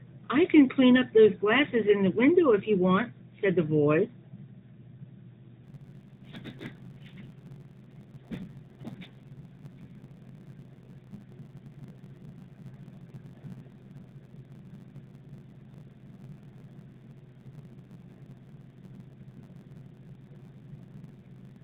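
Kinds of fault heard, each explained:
Block size mismatch (truncated): from 5.63 s to the end, one stage hands on longer blocks than the next stage reads, so the tail of every block is thrown away. The written blocks fit a 512-sample size. Those regular cuts lay a 100 Hz buzz over the speech. Because audio is being dropped, the speech runs 1.07 times fast while staying near its normal pitch, all inside a mobile band that stops at 4 kHz.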